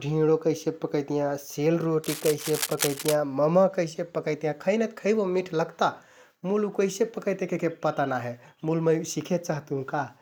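From about 2.04 s to 3.15 s, a burst of cable scratch noise runs over the speech: dense, irregular crackling and rustling, nearly as loud as the voice itself. The texture points to a connection whose contact resistance jumps around rapidly while something is handled, most likely a worn cable, connector or control being moved, so the signal path briefly picks up ragged noise instead of passing the audio cleanly.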